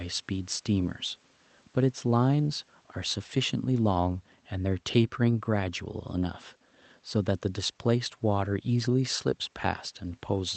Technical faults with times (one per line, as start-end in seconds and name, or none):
none